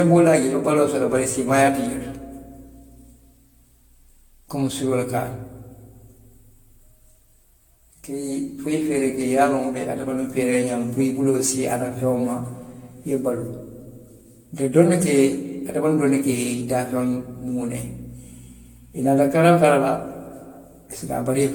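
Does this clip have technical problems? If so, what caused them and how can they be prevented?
Yes. Throughout the speech the sound is swirly and hollow, with a smeared, phasey texture and consonant attacks that blur rather than snap, and nothing above 18.7 kHz. This is likely generation loss: the audio seems to have been decoded and re-encoded around five times with a lossy codec, which fits AAC-LC at about 96 kbit/s. Each pass quantises on a shifted frame grid, so noise and spectral gaps pile up. To prevent it, keep a lossless master and encode to a lossy format only once, at the final step.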